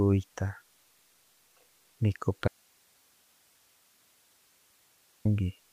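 A speech recording with an audio dropout to a faint residue. At 2.48 s the voice cuts out abruptly, mid-flow. For about 2.8 s, until 5.25 s, only a thin hiss remains, roughly 40 dB below the speech. The speech then returns just as suddenly. The hard edges rule out a natural pause or a fade. The cause is likely a break in the signal feed while the downstream path stayed live, passing only its own noise floor.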